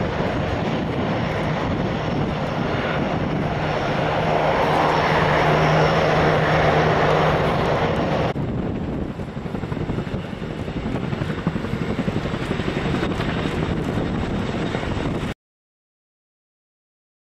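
The audio has a cut-off end: at 15.33 s it stops in the middle of a sound and drops straight to digital silence, held until 17.2 s. The final buffers were never written, so the waveform shows a vertical edge to a flat line, and the spectrogram goes abruptly blank with no decay tail.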